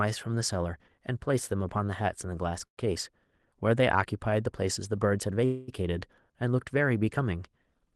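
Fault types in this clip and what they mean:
Short stall from a late packet: Between 2.67 and 2.79 s the speech hangs on its last sound for about 0.1 s, then resumes where it left off with nothing lost. It's a brief held tone, not a fading buzz, which sets it apart from a freeze.
Call audio freeze: From 5.45 to 5.70 s the sound continues as a fading buzz or hiss for 0.23 s, never reaching silence, then picks up without loss. It is longer than the stall, likely from packets held up in transit.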